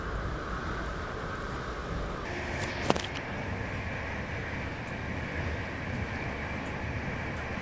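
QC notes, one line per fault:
0.00–2.25 s, wrong sample rate: the opening plays back at two-thirds speed and drops by about 7 semitones, so the sound is noticeably slower and lower than it should be, with tempo and pitch shifted together. That locked pairing means the samples were clocked out slower than they were captured with no resampling in between, and the 2:3 ratio fits audio recorded at 24 kHz being played at 16 kHz.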